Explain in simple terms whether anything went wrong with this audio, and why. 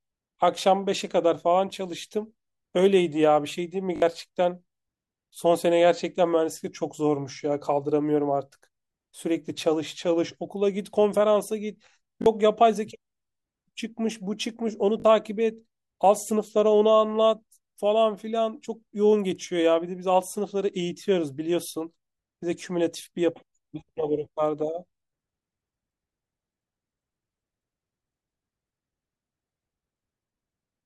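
A repeated buffer fault happens three times, at 3.96 to 4.02 s, 12.22 to 12.26 s and 15.0 to 15.04 s. Fresh audio arrived late, so the same tiny slice, consistent with a 20 ms buffer, replayed as a quick stutter. Unlike a dropout, nothing goes silent, though a few hundredths of a second of speech are lost.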